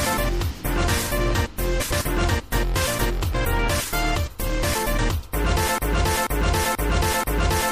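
From the start, the sound is watery and swirly with dulled treble. This is likely MP3 compression at a low bitrate, around 64 kbps, starving the weaker frequencies.

From 1.80 to 2.02 s, frames are out of order. Two adjacent blocks of about 0.1 s, likely four frames each, play swapped, giving a garbled flutter.

From 5.78 s to the end, a broken-record loop sets in. A 0.48 s piece repeats four times back to back. A stalled stream is the likely cause, and the audio that should have played is lost.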